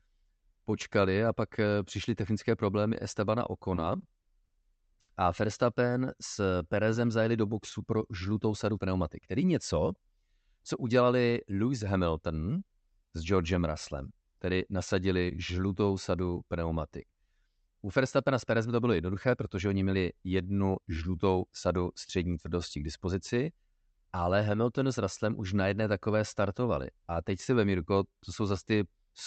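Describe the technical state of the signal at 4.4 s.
At 4.4 s the audio is inside a stretch of repeated stalls (stutter) running from 3.75 to 4.52 s. The jitter buffer ran dry four times as packets arrived late, and the receiver stretched the last sound to fill about 90 ms in all, with the longest gap about 40 ms. Unlike packet-loss dropouts, nothing is missing. The sound hesitates and drags in short hitches rather than losing pieces.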